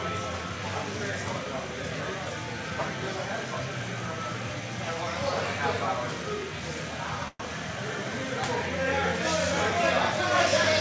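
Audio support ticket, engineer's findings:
Call audio freeze at 7.28–7.46 s. Sound stalls, then trails off as a fading buzz or hiss for about 115 ms, with roughly 20 ms of near-silence before things pick up again. Likely cause is the jitter buffer running dry while packets got held up in transit. Receiver kept extending the last sound until data arrived, then resumed right where it left off. Nothing actually lost, just a gap inserted, so everything after runs about 115 ms late. Band-limited G.722 sound, nothing above 8 kHz, on either side of it.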